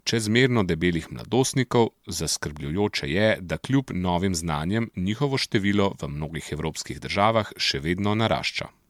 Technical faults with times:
0.00-8.89 generation loss

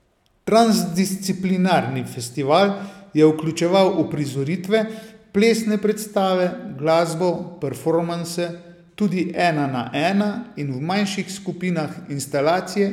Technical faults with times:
none

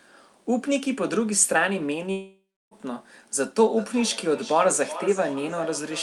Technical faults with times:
2.11-2.74 long network dropout
3.77-6.03 feedback echo between two devices

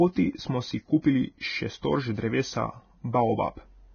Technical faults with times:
0.00-3.94 Vorbis compression

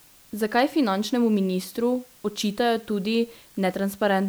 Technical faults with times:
0.00-4.28 low bit depth with dither

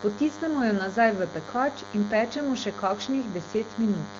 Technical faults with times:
0.00-4.19 DECT cordless phone buzz

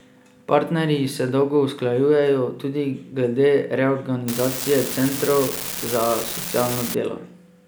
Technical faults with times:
4.28-6.95 unreliable data bit

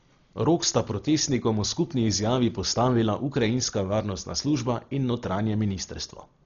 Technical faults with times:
0.00-6.45 Dolby Digital compression

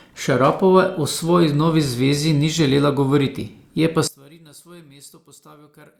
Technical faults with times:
4.08-5.99 one channel inverted

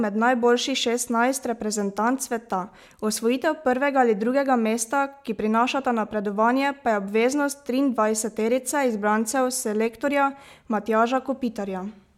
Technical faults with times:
none

